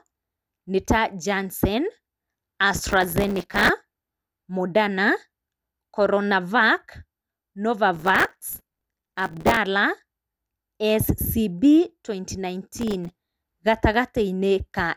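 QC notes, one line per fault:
2.74–3.69 s, 7.94–9.57 s and 12.79–13.15 s, processor overload crackle: gritty tearing over the speech as the processor keeps missing deadlines on short buffers of a few milliseconds, each miss replaying a hard-edged scrap of old audio. The middle burst is longest; each clears once the load drops.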